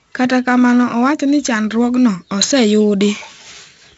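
Right through the speech there's heavy 4-bit ADPCM compression: coarse predicted steps leave gritty hiss riding loud parts, with nothing above 7.7 kHz, which fits roughly 64 kbps.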